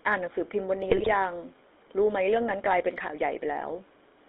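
From start to finish the speech has passed through the GSM full-rate codec. This coder keeps a model of the vocal tract and drives it with a sparse, regularly spaced pulse excitation instead of the real waveform, and the line limits everything to roughly 300 Hz to 3.6 kHz, which fits a 13 kbps codec. The result is a plainly audible buzzy, gravelly roughness, with a thin, boxy tone.

From 0.9 to 1.09 s, GSM bit errors corrupt the decoder's input. Flipped bits in the filter, pitch and gain values give it wrong instructions, so it bends the spectrum and swings the level. The damage points to an error rate around 1.6 percent across a short run of about eight frames. For that stretch the speech breaks into squawks, pops and a wet gargling sound before it recovers.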